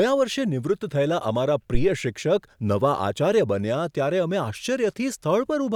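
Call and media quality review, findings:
Phantom power thump, 1.75–1.92 s: deep low-frequency thump in the speech, peak about −9 dBFS, 40 ms decay. Probable component: mic input coupling capacitors. Mechanism: supply switched on or off on a live input, and the voltage step passes through.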